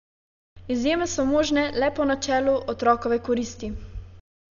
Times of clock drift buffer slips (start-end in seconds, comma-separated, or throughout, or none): 0.36-3.81